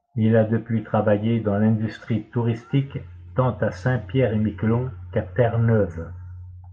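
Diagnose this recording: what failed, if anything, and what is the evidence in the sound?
Codec failure: a corrupt frame decoded. From 2.99 to 3.02 s a brief artifact appears, peaking near -35 dBFS. The decoder played damaged data, misplacing energy in frequency over roughly two frames' duration. A spectrogram shows a short vertical smear unrelated to the speech harmonics.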